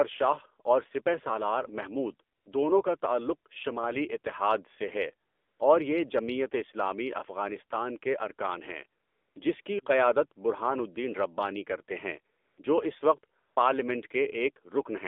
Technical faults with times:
0.00-15.07 AMR narrowband mobile codec
2.36-2.46 AMR comfort noise
5.28-5.60 AMR comfort noise
9.02-9.36 AMR comfort noise
9.62-9.66 AMR comfort noise
12.36-12.58 AMR comfort noise
13.40-13.56 AMR comfort noise

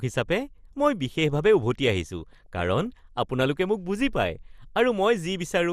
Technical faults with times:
0.00-5.72 MP2 compression
2.32-2.86 DAB burbling

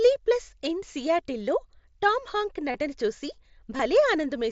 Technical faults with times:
2.72-2.74 concealed Bluetooth headset packet loss
3.77-3.79 concealed Bluetooth headset packet loss

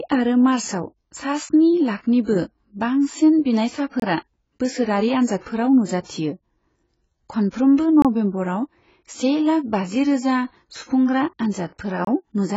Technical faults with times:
0.00-12.57 AAC compression
4.00-4.02 gap between chunks
8.02-8.05 gap between chunks
12.05-12.07 gap between chunks

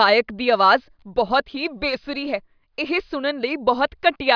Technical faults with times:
none

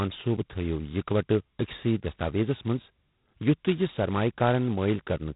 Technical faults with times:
0.00-5.35 G.726 ADPCM

